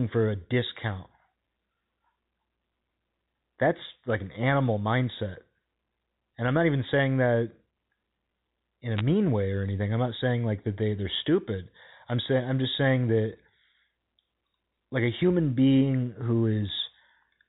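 Bit errors on a digital phone line occur from 8.97 to 9.01 s, just after "in a" and before "way or anything i'm". Over these few frames, roughly one bit in three hundred arrives flipped on the G.711 A-law line, which otherwise carries the full telephone band up to 4 kHz. Each error corrupts a single sample. Flips in the sign or upper bits produce sharp ticks, so the speech picks up a brief patch of crackle while its underlying sound stays unchanged.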